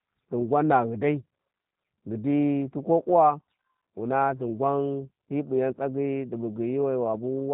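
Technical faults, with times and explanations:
throughout: G.729 codec. The speech was squeezed through a low-rate model-based coder, consistent with an 8 kbit/s stream, that resynthesises each 10 ms frame from a vocal tract filter, pitch prediction and sparse pulses. The band stops at 4 kHz, leaving it dull, rough and plainly synthetic.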